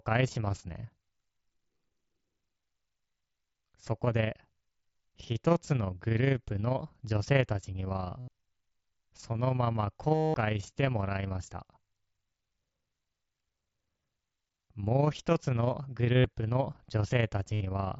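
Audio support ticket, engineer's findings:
Overlap-add ripple, whole clip: fast robotic flutter, level pumping about 6 dB at around 30 Hz. Frame overlap in resynthesis not summing flat. Waveform shows regular envelope scalloping, spectrogram vertical banding.

Concealed Bluetooth headset packet loss at 8.19–8.28, 10.15–10.34, 16.17–16.24 and 17.53–17.61 s: buzzy held tone, warble on recovery. Receiver looping the last waveform stretch. Spectrogram shows frozen harmonic bars, longest around 200 ms at 10.15 s. The mSBC link's 8 kHz band edge stays visible throughout.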